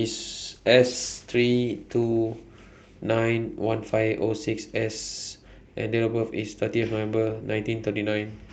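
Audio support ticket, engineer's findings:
Call bitrate drop, 0.55 to 3.07 s: speech coarse, highs cut near 12 kHz, worst for 1.2 s. Fits a bandwidth-estimate dip pushing the encoder from about 48 to 17 kbps.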